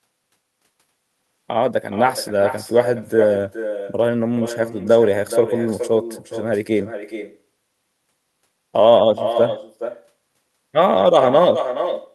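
Throughout the speech, an echo with no canceller trails every phrase by roughly 400 ms, sitting about 9 dB below the direct signal. The far end's loudspeaker output is re-captured by its microphone and returned uncancelled, giving a thinner delayed copy.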